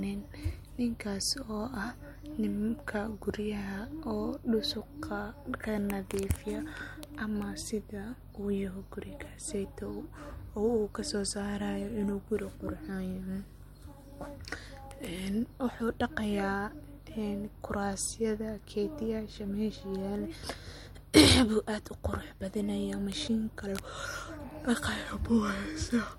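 Nothing goes wrong anywhere in the speech here, so there's no technical fault to point to at any moment.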